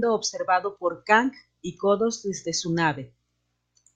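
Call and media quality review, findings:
No technical faults found in the speech signal; level, continuity and bandwidth stay consistent throughout, with nothing to attribute to any component in the capture, transport or playback path.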